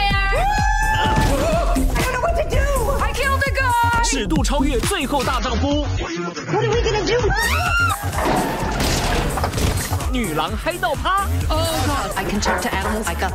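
From 5.38 s to 7.38 s, an adaptive stream drops to a lower bitrate for two seconds. When the connection slows, the player switches to a leaner encoding. Here nothing survives above about 6.9 kHz, so the top end goes dull and codec artefacts rise, which fits a step down from around 96 kbit/s to around 24 kbit/s AAC. Unlike a dropout or packet loss, the sound never breaks. The quality changes abruptly at both edges, and there is no gap.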